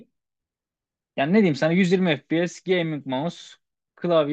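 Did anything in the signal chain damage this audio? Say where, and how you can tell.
No, nothing in the signal chain audibly damaged this speech recording; the signal is continuous, with no gaps, discontinuities or distortion at any stage between capture and playback.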